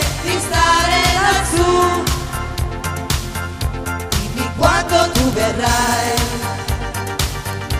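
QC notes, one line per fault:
0.16–7.75 s, word clock ticks: a train of sharp ticks at a steady rate of roughly ten per second, about seventy in all, each of uneven strength. The receiving device is running on its own clock rather than locking to the digital source, so the two drift apart by something on the order of 200 ppm. At every slip a sample is dropped or repeated, and the tiny discontinuity fits a single-sample slip each time.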